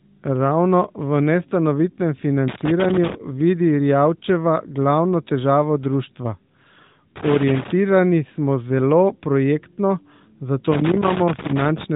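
Speech heard through a narrowband mobile codec that stops at about 3.8 kHz carries loose connector crackle at 2.48–3.15 s after "v nestanovitnem", 7.16–7.72 s before "smo zelo projektno", and 10.72–11.84 s. It is irregular scratching from a contact breaking and remaking, unlike steady codec buzz or level-locked clipping.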